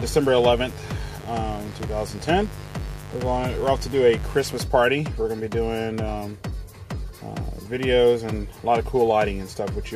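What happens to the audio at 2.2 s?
At 2.2 s the sound is under a steady, raspy mains buzz that runs from the very start to 4.58 s. Sharp switching spikes, of the kind a dimmer, rectifier or unshielded run injects, arrive twice per 50 Hz cycle. Their 100 Hz pulse train spreads into harmonics reaching several kilohertz, giving a gritty edge rather than a smooth hum. It sits roughly 15 dB below the wanted signal.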